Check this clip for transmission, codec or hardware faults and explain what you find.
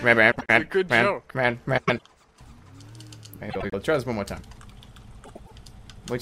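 The clip has one fault type: frames out of order, occurring four times, at 0.31–0.50 s, 1.77–2.02 s, 3.50–3.74 s and 5.25–5.52 s. In each, two neighbouring chunks of audio got decoded in swapped order, so a short stretch plays its second half before its first. You hear a garbled flutter rather than a gap, and no time goes missing. The first swap uses roughly 78 ms chunks and the other three about 105 ms, which fits runs of three or four codec frames.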